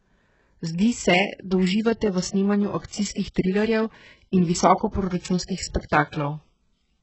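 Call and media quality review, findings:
HE-AAC compression, whole clip, 0 to 7 s. Heavy damage: s sounds gritty and metallic, nothing above 8 kHz. Likely the HE-AAC encoder at a very low bitrate, around 8 kbps, rebuilding upper bands by copying lower ones upward. This differs from a plain low-pass: treble is present up to 8 kHz, but its harmonics are misaligned and synthetic rather than simply dull.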